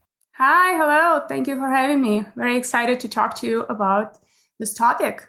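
At 2.05 s a call bitrate drop begins and lasts to the end. The encoder's budget falls from 40 to 17 kbps, staying lowest for 1.63 s. Speech turns coarse and muffled, with the highs trimmed: a continuous smearing, unlike packet-loss gaps.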